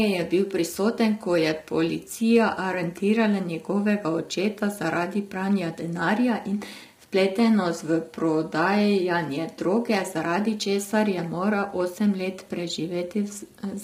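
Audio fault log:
Throughout: low-delay AAC compression; speech sounds rough and grainy, noise filling between harmonics rather than swirling, which fits short frames of likely AAC-ELD near 24 kbps.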